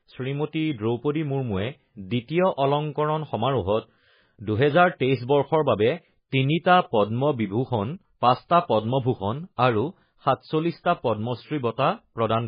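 Throughout, the speech sounds watery and swirly with nothing above 5 kHz, likely heavy MP3 compression, which points to a bitrate around 16 kbps.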